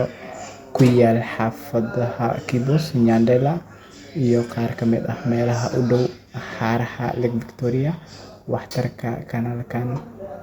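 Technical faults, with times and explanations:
Nothing technical stands out in this speech recording; there's no glitch or defect anywhere to point to.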